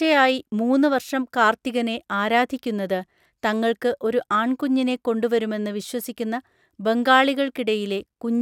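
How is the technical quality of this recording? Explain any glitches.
No technical glitches can be heard anywhere in this speech recording. There is nothing in the audio that needs explaining.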